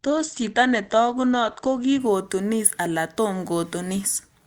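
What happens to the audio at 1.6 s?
At 1.6 s the speech is still in the opening stretch of an adaptive stream starting at a low bitrate, from 0.0 to 2.0 s. The player began on a lean rendition while it measured the connection, so nothing above 8.4 kHz survives and codec artefacts are pronounced, which fits Opus at around 16 kbit/s. At 2.0 s it switches to a richer rendition, and the treble returns abruptly with no gap. That seamless jump is what sets it apart from a dropout or a persistent low-pass filter.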